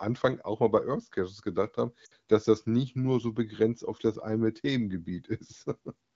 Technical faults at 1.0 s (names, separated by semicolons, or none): none